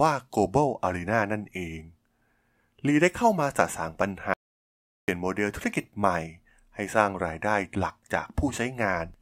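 At 4.34 s the speech stops dead and nothing returns until 5.08 s, an audio dropout to silence lasting about 0.74 s. The gap holds silence, with no room tone or hiss, so whatever was said in that stretch is simply missing. The likely cause is a lost input, with the recorder writing silence meanwhile. On a waveform it shows as a flat line, and on a spectrogram as a fully blank vertical band with hard edges.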